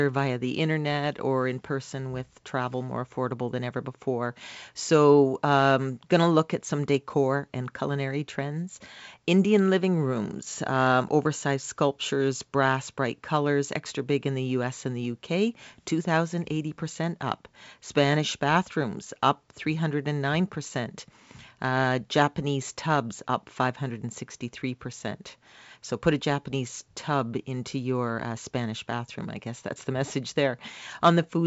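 Nothing goes wrong anywhere in this speech clip; it just carries the usual marks of a call, with the microphone processing trimming the deepest bass and G.722 wideband coding at 64 kbit/s leaving nothing above 8 kHz.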